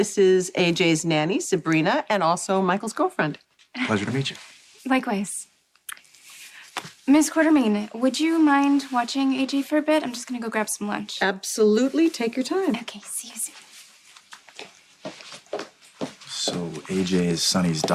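No technical faults can be heard anywhere in the recording.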